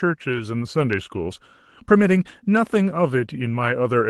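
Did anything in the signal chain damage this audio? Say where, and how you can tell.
Yes. At the network stage, packets were lost around 0.77–0.83 s and 1.95–2.01 s, each a lost packet rebuilt from error correction. The decoder substituted low-bitrate copies carried in the following Opus packets, so about 40 ms in each sounds rougher and noisier. The waveform shows no gap, and a spectrogram shows only brief smeared, noisier patches.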